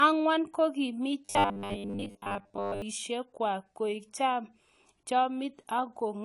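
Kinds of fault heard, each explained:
AAC compression: The whole clip sounds dull and smeared, with plainly audible codec damage. That fits a lossy AAC-LC encode at a low bitrate, likely around 32 kbps, throwing away the highs and blurring the fine detail.
Robotic sound from repeated short buffers: From 1.25 to 2.82 s, between "ang'wan kokiimi" and "kwak koik", the speech turns into a rigid metallic buzz at 100 Hz. That points to a 10 ms chunk likely being replayed over and over while most of the real audio gets skipped.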